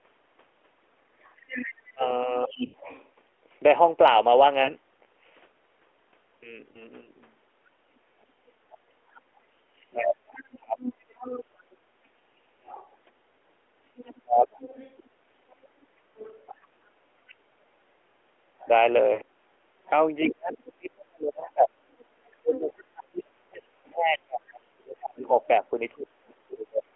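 It's a speech clip over a narrowband AMR mobile call, so everything sits below 4 kHz, and it's got a fair few problems. First, the other side's voice leaking through: from 1.22 to 3.08 s a second voice sits only about 5 dB under the talker, then it comes back from 7.95 to 25.47 s at about 15 dB down. That's likely the far end playing on the talker's loudspeaker and the echo canceller not fully stripping it from the mic. Tied to that is speech suppressed in double talk, where the talker gets squashed while both sides are going at once. Between 1.94 and 2.5 s there's around 0.2 s of dips reaching about 25 dB, between 9.93 and 10.78 s about half a second of drops down to about 35 dB, and from 14.22 to 26.83 s it keeps happening, roughly 7 s in total at up to about 35 dB. That's likely the canceller failing to tell its own talker from the echo and pulling both down. Then there are lost AMR speech frames, where the decoder papers over a gap by repeating the last good pitch and vocal tract settings while fading the gain. 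The worst is at 2.66 to 2.76 s, an 80 ms hole that fits about four 20 ms frames, so the sound smears and fades out before coming back rough. Shorter 40 ms ones hit at 4.64 to 4.71 s and 19.14 to 19.20 s, and there's a single 20 ms blip near 6.7 s that just gives a quick dip or warble. Last, at 12.54 to 12.64 s you get background gated by the echo canceller, a 100 ms dropout of the room sound of about 13 dB while the loudspeaker was active, and the room comes straight back once the canceller releases.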